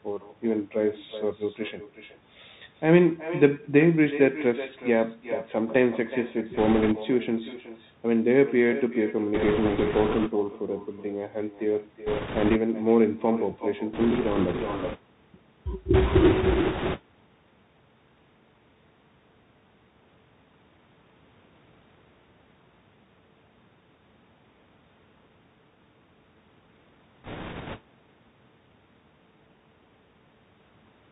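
Throughout, each phrase is followed about 0.4 s later by a thinner copy about 14 dB quieter. This is echo with no canceller: the far end's loudspeaker fed back into its microphone, and nothing removed it.

Also throughout, the speech sounds boxed and dull with nothing above 4 kHz, and s sounds turn scratchy over a granular hiss. These are plainly audible marks of the Bluetooth CVSD headset codec, whose one-bit, adaptive-step coding fits a 64 kbps link.

A rushing, crackly noise without sharp clicks rises over the speech at 6.57–6.93 s, 9.34–10.31 s, 12.06–12.57 s, 13.93–14.99 s, 15.94–17.00 s and 27.24–27.79 s. These are bit errors on a Bluetooth voice link. The flipped bits smear into noise rather than pops, and the burst at 15.94–17.00 s is harshest, with roughly one bit in ten wrong.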